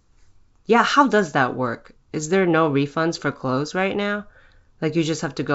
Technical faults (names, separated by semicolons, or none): none